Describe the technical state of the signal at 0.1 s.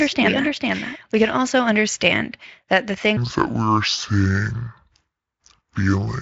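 At 0.1 s a doubled audio track is already under way, lasting until 1.42 s. A full-band copy of the speech trails roughly half a second behind at about 5 dB lower, likely from a second, slower capture path. Unlike echo or reverb, it has no decay or room colour and ends abruptly.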